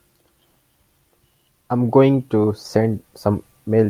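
No technical faults are audible.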